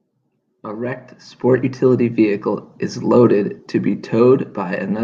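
No technical faults can be heard anywhere in the speech recording.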